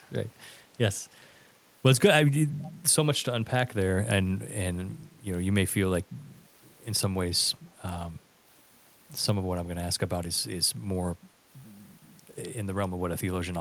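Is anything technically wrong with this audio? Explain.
Yes, there's echo leak at 1.24 to 1.30 s and 2.62 to 2.71 s: faint scraps of the speech return about 221 ms later, very quiet the first time, a bit louder the second. Likely a far-end echo canceller letting loudspeaker pickup slip back.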